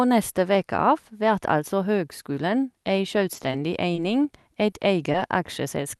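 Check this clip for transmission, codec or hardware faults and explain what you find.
Two kinds of network fault are audible in the speech, five events in all, in the last three seconds.

Short concealed packet loss occurs at 3.33 to 3.37 s, just after "vert altså høgskulen ei", then at 4.70 to 4.74 s and 5.12 to 5.16 s. Each sounds like a brief smear or wobble, with a sliver of real sound gone. About 20 ms of audio never reached the decoder. The receiver covered the gap by extending the preceding sound, following its pitch where voiced and using shaped noise otherwise, then crossfaded back into the genuine signal.

Short stalls from a late packet occur at 3.94 to 3.98 s and at 5.96 s, running to the clip's end. Here a sound is held slightly too long, with a faint buzzy dip, but nothing is lost. A packet arrived about 20 ms late, so the jitter buffer emptied. The receiver stretched the last sound by about 20 ms until the data came in, then resumed exactly where it had stopped. 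The high-frequency ceiling near 12 kHz comes from the call codec's normal band limit.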